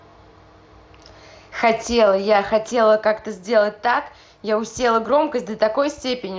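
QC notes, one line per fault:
1.6 s and 5.04 s: concealed Bluetooth headset packet loss. Each time, a single 7.5 ms gap, consistent with one lost headset frame, is bridged by repeating the best-matching stretch of the preceding waveform, so there is only a faint smear rather than a silent hole or click. That sets it apart from an unconcealed dropout; a longer run would instead hold a buzzy tone and warble on recovery. Through the mSBC link, speech stays wideband.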